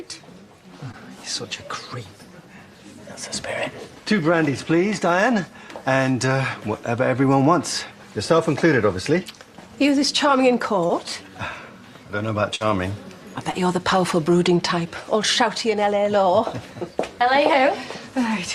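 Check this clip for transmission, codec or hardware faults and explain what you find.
There are transmission faults: short concealed packet loss in three places and one burst of packet loss.

Short concealed packet loss occurs at 0.91–0.95 s, 10.87–10.91 s and 13.51–13.55 s. In each, about 20 ms arrived too late and the receiver extended the preceding sound to fill it. The result is a brief smear or wobble.

A burst of packet loss runs from 12.55 to 12.67 s. About 40 ms went missing. Concealment held the last sound for roughly 50 ms as a fading buzz or hiss, and then about 9 ms of real audio was skipped.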